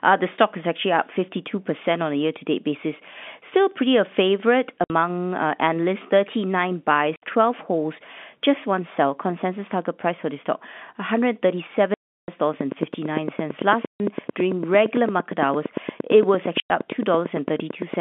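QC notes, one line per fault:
4.84–4.90 s, 7.16–7.22 s, 11.94–12.28 s, 13.87–14.00 s, 16.60–16.70 s: packet loss filled with silence. The first hole falls between "pretty a favorite" and "uh analysts". Each gap of 60 to 340 ms is dead silence with hard edges. The lengths fit lost 20 ms packets.
12.61–17.95 s: train of clicks. About 50 evenly spaced ticks arrive at 8.8 per second, peaking about 15 dB above the signal. They are likely from electrical interference or a struggling interface.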